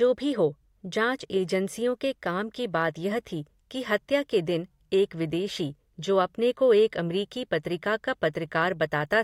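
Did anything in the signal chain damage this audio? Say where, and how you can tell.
No, nothing along the signal chain has left an audible mark on this speech recording, and the signal stays continuous and intact throughout.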